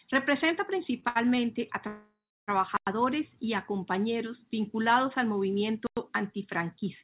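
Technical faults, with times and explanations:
1.00–1.04, 1.08–1.17 and 1.35–1.39 s: short stall from a late packet. Packets arrived late and the jitter buffer ran dry. The last sound is held for 23, 71 and 20 ms, then continues with nothing lost.
1.87–2.50 s: call audio freeze. The speech halts for about 0.6 s, a fading held buzz and then 290 ms of silence. The likely cause is packets held up in transit that emptied the jitter buffer. It resumes where it stopped.
2.77–2.87 and 5.87–5.97 s: gap between chunks. There are 100 ms holes, 3.1 s apart, where silence sits at each chunk join. The first falls just before "y a compañeros vinculados" and the second just after "a compañeros vinculados al".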